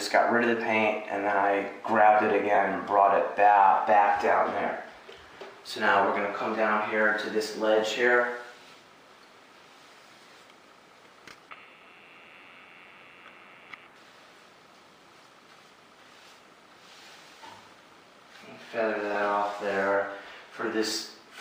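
At 2.55 to 2.57 s and again at 19.14 to 19.16 s, lost LE Audio frames leave short gaps. The gaps are about 22.5 ms and 15 ms, which fits three and two 7.5 ms frames. The decoder refills them by repeating the last spectrum with scrambled signs. Each is heard as a brief noisy smear, too short to fade into silence. Light lossy compression is present throughout.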